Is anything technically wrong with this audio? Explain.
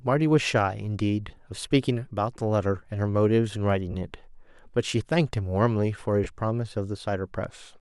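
Yes. The speech has three brief dropouts where the sound turns into a short hiss-like smear, at 1.28 to 1.38 s, 3.91 to 3.95 s, and 6.24 to 6.26 s. These are lost LE Audio frames. About 50 ms goes missing in scattered pieces across the first 100 ms window, with runs of roughly 20 ms. The later two lose 30 ms and 20 ms. The durations fit 10 ms LC3 frames. The decoder covers each gap by repeating the last spectrum with randomized signs, which is why the voiced sound goes noisy. Light lossy compression is also present.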